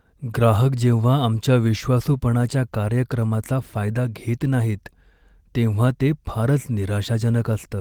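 No faults can be heard anywhere in the clip. The speech runs without any dropout, glitch, distortion or other technical fault at any point.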